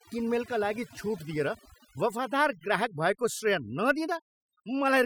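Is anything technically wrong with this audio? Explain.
Yes. Overdone noise removal runs through the whole speech clip. The noise reduction was set too aggressively, so any frequency band sitting close to its noise estimate is pulled far down or shut off, taking the quieter parts of the voice along with the noise. The background drops and breaks up into twinkling, chirpy specks. On a spectrogram, the gaps show scattered isolated dots instead of an even noise floor, and the speech harmonics look patchy and ragged at the edges.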